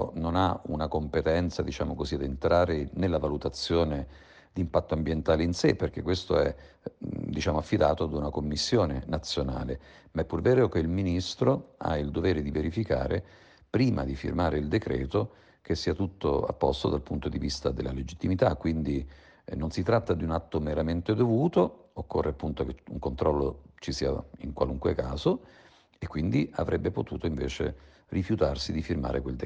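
No technical faults can be heard anywhere in this recording. Nothing in the sound calls for comment.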